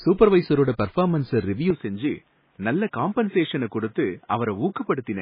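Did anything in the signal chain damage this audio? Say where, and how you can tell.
Yes. Codec stage: the speech is watery and swirly throughout, with nothing above 5 kHz, likely heavy MP3 compression. Unlike a device change, it never shifts.

Capture stage: at 1.70 s the band abruptly narrows to 3.8 kHz, level drops about 5 dB and faint new background noise arrives. The input was likely switched to a poorer device.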